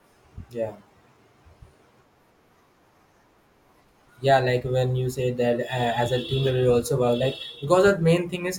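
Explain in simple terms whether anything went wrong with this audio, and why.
Listening to the whole recording of speech, nothing stood out as having gone wrong.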